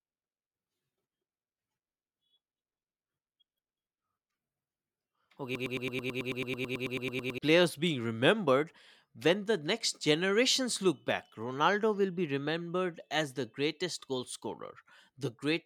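From 5.55 to 7.38 s, a broken-record loop repeats one 0.11 s fragment 17 times. A stalled stream is the likely cause. Speech resumes at "players being remembered when".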